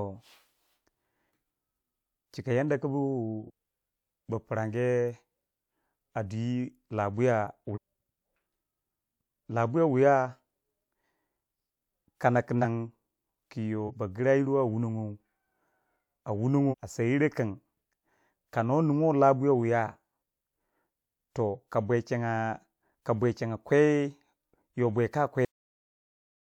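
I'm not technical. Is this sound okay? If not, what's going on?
No. The speech jumps ahead five times because of compressed frames skipped: missing chunks of audio, about 46 ms each, simply aren't played. This happens at 3.46 s after "yada ku bu" (about a fifth of a second lost), 7.73 s (about half a second), 12.61 s after "kana ku" (about 0.3 s), 13.86 s (about 0.2 s) and 16.70 s just before "a seyiro" (about 0.7 s).

There is also a cut-off end. At 25.45 s the speech stops mid-sound and drops straight into dead silence, because the final stretch of audio was never written.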